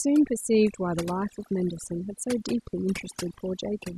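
Throughout the speech, overdone noise removal is audible: a noise reducer pushed too hard has gated individual frequency bands down whenever they sat near its noise estimate, leaving a near-silent background with twinkling specks. A spectrogram shows scattered isolated blobs between words and ragged, hole-riddled harmonics.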